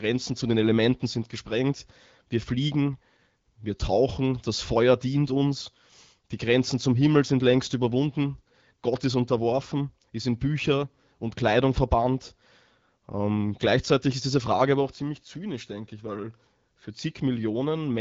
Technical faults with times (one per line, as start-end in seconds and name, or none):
none